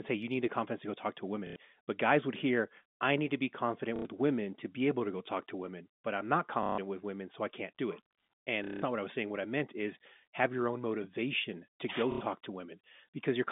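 At 1.47–1.56 s, 3.96–4.05 s (after "need to be confident"), 6.63–6.78 s (after "I'm not"), 8.64–8.82 s (before "not what I was") and 12.12–12.21 s, there is packet loss with the last packet repeated. Each gap is filled by replaying one chunk, not by silence, so the speech stutters robotically. The repeats buzz at the packet rate, which fits roughly 30 ms packets.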